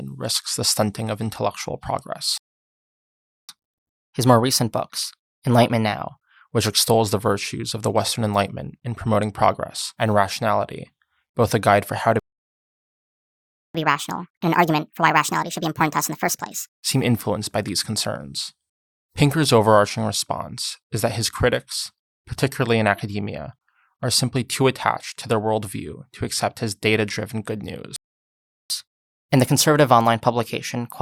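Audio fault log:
2.38–3.49 s playback stall: the speech drops into silence for about 1.1 s, then carries on; likely the player ran out of buffered data or its thread was blocked.
3.49–6.49 s catch-up at higher speed: from "which extols the virtues" the speech runs 1.1 times fast and about a semitone and a half sharp while resampling works off the backlog.
12.19–13.75 s playback stall: just after "guide for how to" the speech goes silent for about 1.55 s before resuming; likely a buffer underrun or a blocked playback thread.
13.75–16.75 s catch-up at higher speed: the speech rushes at 1.5 times speed, pitched up about seven semitones, as the player resamples hard to recover the longer gap.
27.96–28.70 s playback stall: right after "his data driven good" the sound cuts out for about 0.74 s; likely the player starved for data or stalled on a blocked thread.
28.70–31.01 s catch-up at higher speed: to the end the speech plays 1.1 times fast, about a semitone and a half high, as resampling makes up the lost time.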